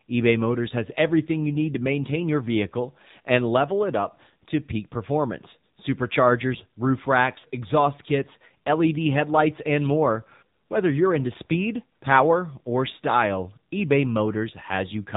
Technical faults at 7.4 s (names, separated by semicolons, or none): AMR narrowband mobile codec; lost AMR speech frames